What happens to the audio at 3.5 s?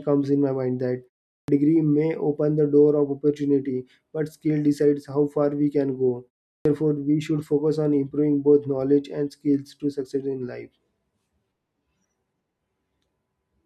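Nothing goes wrong at 3.5 s; the speech plays through intact at that moment.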